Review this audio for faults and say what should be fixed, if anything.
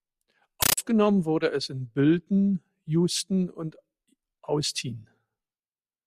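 From 0.62 to 0.78 s, loud chattering static replaces the speech. This is a compressed stream played as audio: undecoded AC-3 frames arriving as 13.3 ms noise bursts, 31.25 times a second.

To prevent it, make the digital input detect Dolby Digital and decode or mute it instead of passing the bitstream through as samples.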